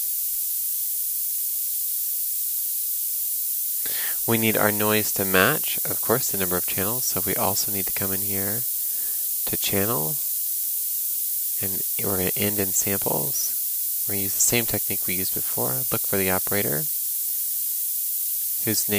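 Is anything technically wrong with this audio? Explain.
Yes. Throughout the clip there is low bit depth with noise shaping. The audio is quantised to about 5 bits, and the rounding error is pushed upward in frequency, leaving a steady, thin hiss close in level to the sound itself. Unlike plain broadband noise or unshaped truncation, it climbs steeply toward the top of the band.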